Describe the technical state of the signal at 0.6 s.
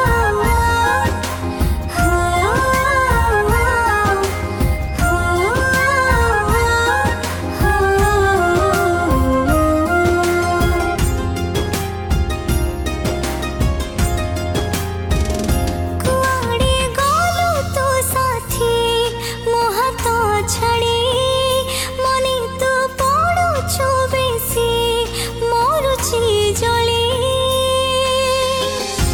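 At 0.6 s the signal is in a repeated frames fault running from 0.56 to 0.61 s. A block of about 46 ms of compressed audio was written twice, and the decoder plays it a second time. The length fits a pair of codec frames. The result is a short stutter where the same fragment of sound is heard again, and the audio becomes 46 ms longer than the original.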